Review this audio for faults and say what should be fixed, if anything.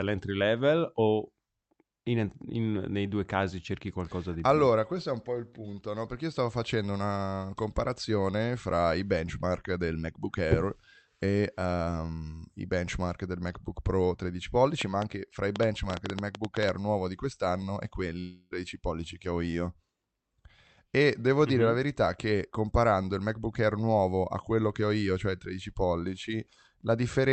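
A train of clicks runs from 14.81 to 16.70 s: around fifteen sharp, similar pops at roughly 7.5 per second, unevenly spaced and peaking about 15 dB above the speech. The likely cause is interference or a faulty connection or power supply. On a waveform they show as thin spikes, and on a spectrogram as vertical broadband lines. Shielding cables, moving away from noisy equipment and checking the audio interface should stop them.

A long network dropout runs from 18.19 to 18.53 s, losing about 320 ms of audio. The receiver filled the gap with a fading buzz continued from the last sound, and the speech resumes with that section missing, likely through packet loss. A spectrogram shows smeared, decaying energy instead of speech structure. A more stable connection, or stronger packet-loss protection in the Opus settings, would reduce this. Across the call path, content stops above about 8 kHz.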